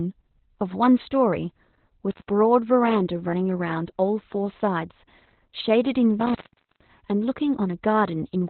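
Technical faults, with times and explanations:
Throughout: Opus voice compression, heavily damaged at about 8 kbps in SILK narrowband mode; nothing above 4.3 kHz survives, leaving the speech muffled, hoarse and slightly robotic.
2.11 to 2.28 s, 6.20 to 6.94 s: intermittent contact, a loose connection opening for about 140 ms and then 460 ms, cutting the sound out with crackle at each edge.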